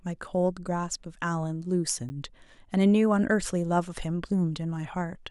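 At 2.09 s there's a block of digital silence, about 10 ms where the speech drops straight out and snaps back with no fade. That abrupt cut reads as a quick tick, the kind you get when the output buffer isn't filled in time.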